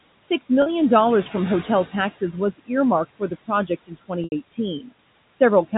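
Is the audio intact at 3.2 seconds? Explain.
No. At 3.2 s the sound falls inside a stretch of speech cut by the noise suppressor, which runs from 3.19 to 4.11 s. The suppressor mistakes some of the quieter speech for background noise and turns it down. Across that window about a fifth of a second of speech is affected, dropping by as much as about 22 dB. Those parts sound swallowed or faint, as if they fade into the background.

The same moment also carries noise suppressor artifacts, which run through the whole clip. The suppressor pushes the steady room noise down by about 20 dB, frame by frame and band by band. The leftover noise is not smooth. It sinks in the gaps and rises under the speech, and the speech can come across thin or watery.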